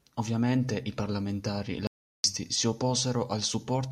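At 1.87 s the speech cuts out abruptly into an audio dropout to silence lasting until 2.24 s, about 0.37 s of nothing, not even room tone. The input was likely lost briefly while recording continued. The waveform shows a flat line there, and the spectrogram a blank vertical band.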